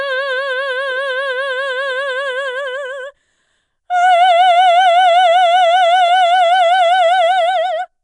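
Throughout the music, a rough, hissy halo and smeared, underwater blur point to likely Nellymoser compression: weak bands receive no bits and are filled with noise, at a rate consistent with 44 kbps. A spectrogram shows speckled noise between partials and nothing above 10.6 kHz.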